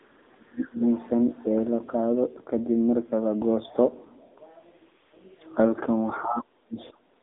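A speech recording runs through AMR narrowband mobile codec damage from start to finish. Nothing reaches above 3.8 kHz, and the usable band sits between roughly 250 Hz and 3.7 kHz. On a spectrogram this shows as a hard ceiling with empty space above it and thinned lows. The voice sounds buzzy and synthetic, as a low-rate pulse-excited vocal-tract model does, which fits the 7.95 kbps AMR mode. From 0.00 to 0.81 s the talker's level collapses for most of that stretch, with the deepest dips about 35 dB down. The waveform shows a pinched, gappy envelope, and the spectrogram shows harmonics fading or breaking into fragments. This is speech suppressed in double talk: the echo canceller, likely confused by both sides talking at once, turned down the near-end voice along with the echo it was trying to remove. Between 1.39 and 1.45 s a brief scrap of the other side's voice leaking through appears. 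It is very faint, around 40 dB below the main speech, and would show as a short, weak smear of extra energy on the spectrogram. The likely cause is loudspeaker echo that the canceller did not fully remove from the microphone.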